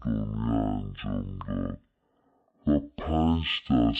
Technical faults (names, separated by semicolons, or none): stereo read as mono